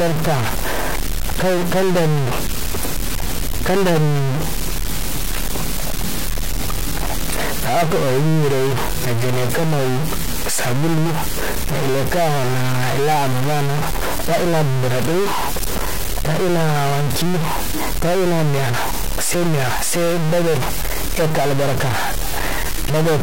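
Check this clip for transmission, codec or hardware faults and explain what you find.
There is one hardware fault, present for the whole speech recording: a stuck bit. Throughout, a harsh, buzzy distortion rides on the sound, and the pauses fill with loud noise instead of falling quiet. The likely cause is one data bit held at a fixed value, so about half the samples are shifted by a step of roughly -15 dBFS. On a waveform, the trace jumps between offset levels; a spectrogram shows broadband energy smeared across every frequency, even between phrases.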